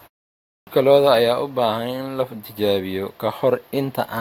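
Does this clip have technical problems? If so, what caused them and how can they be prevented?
Yes. A clipped start after a pause occurs at 0.47 s: the playback device idled through the 0.47 s of opening silence and woke late, swallowing about 0.2 s before "lo'da ayaa u". Keeping the output stream active during silence, rather than letting the device sleep, prevents it.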